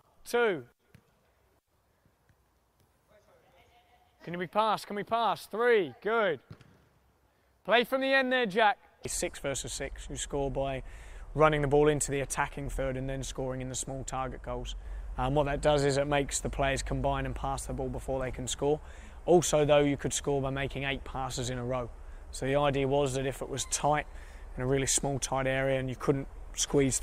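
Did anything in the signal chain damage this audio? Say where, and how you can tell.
No, nothing in the signal chain damaged this audio.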